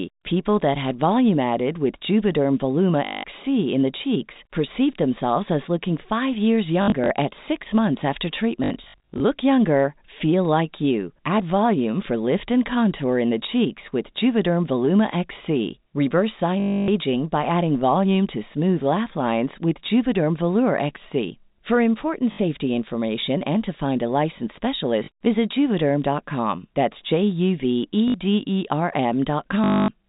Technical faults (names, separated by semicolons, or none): packet loss with last packet repeated